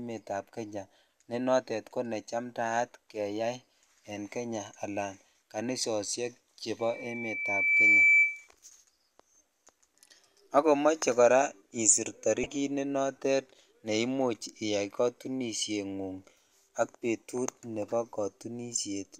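Loudspeaker feedback squeal appears from 6.79 to 8.48 s. A microphone is picking up the loudspeaker it drives, and at about 2.3 kHz the gain around that loop rises above one, so the tone feeds itself. It swells over roughly a second into a steady, piercing whistle that ends up about 10 dB louder than the speech.

DAB burbling follows from 12.43 to 12.48 s, between "akomoche kora isir" and "ne noton ne imuch". Weak digital radio reception has let bit errors slip past error correction into the MP2 audio stream, corrupting sample values so that short blips of noise land in single sub-bands. In under 50 ms it produces a few brief watery blips. That points to a short run of damaged frames and an error rate of around a tenth of a percent.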